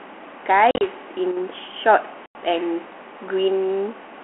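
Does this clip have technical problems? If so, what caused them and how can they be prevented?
Yes. There is packet loss on an ADPCM call: from 0.71 to 0.89 s, 80 ms of audio drops out in scattered gaps across about 100 ms, the longest 40 ms, and at 2.26 to 2.35 s 90 ms of audio is lost. Each gap is filled with hard-edged silence. Because the ADPCM decoder's adaptive predictor and step size lose track of the sender's, speech resumes slightly distorted before settling. The light, 250 Hz to 3.4 kHz band-limited coding around these gaps fits G.726 at 32 kbit/s. Prevention: carry the call over a network with jitter buffering and loss concealment that resets or resynchronises the ADPCM decoder state after missing packets.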